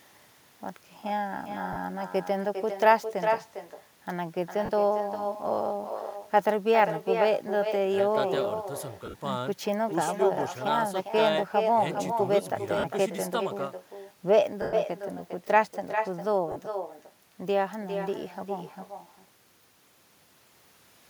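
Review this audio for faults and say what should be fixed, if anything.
Echo with no canceller: the far end's loudspeaker feeds its microphone unchecked, so throughout the speech a thinner copy returns about 0.4 s later at about 6 dB below the talker.

Lost LE Audio frames: Bluetooth LE Audio frames dropped, and the LC3 decoder concealed the gaps by recycling the previous spectrum with randomised signs. This gives brief noisy smears at 1.73 to 1.76 s, 4.65 to 4.70 s, 9.06 to 9.20 s (scattered dropouts totalling about 90 ms, the longest run around 40 ms), 12.79 to 12.84 s, 14.62 to 14.73 s (110 ms, fading as concealment decays) and 16.52 to 16.56 s.

To prevent both, enable acoustic echo cancellation on the far-end device, and strengthen the Bluetooth link by reducing distance and interference or by adding retransmission margin.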